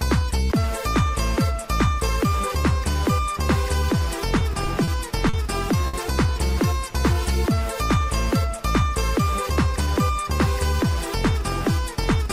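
From 4.39 to 4.90 s, packets arrived late or slower than playback, so the jitter buffer ran dry four times. The receiver extended the last sound to fill 60 ms in total, with the longest gap 30 ms and nothing lost. These repeated stalls make the audio drag and stutter.

Two short stalls from a late packet follow, at 5.29 to 5.36 s and 5.87 to 5.96 s, where delay jumped by 40 ms and then 60 ms. Each time the buffer emptied, the current sound was held for 40 ms, then 60 ms, before resuming at the same point, with nothing missing.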